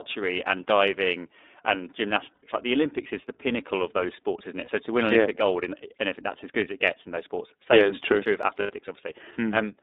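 A speech clip carried through the iLBC codec from start to finish. The band runs only from about 250 Hz to 3.7 kHz, so the sound is thin and narrowband. Codec damage is plainly audible as a rough, slightly synthetic texture, which fits 30 ms frames at about 13 kbps. Lost iLBC frames cause three brief gaps, at 2.34 to 2.45 s, 4.65 to 4.69 s and 8.6 to 8.72 s. The decoder fills each gap with a held, buzzy repeat of the last pitch cycle. The longer gaps last about 90 ms, roughly three frames' worth, and the short one about 30 ms. Each frame is coded independently, so the speech recovers almost at once.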